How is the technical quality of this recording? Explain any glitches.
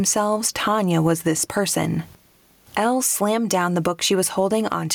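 Quality is compromised by gain pumping across the whole clip. The gain ducks sharply under every loud sound, by around 15 dB. Levels feel squashed together. The likely cause is input gain set far too high, with a fast limiter clamping down.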